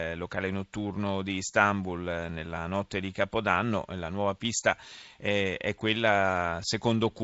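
Nothing stood out on listening to this speech, which comes through a G.722 wideband telephone path at 64 kbit/s with no content above about 7.7 kHz.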